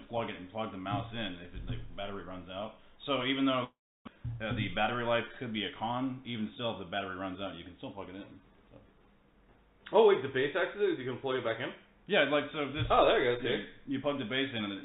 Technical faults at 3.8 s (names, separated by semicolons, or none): long network dropout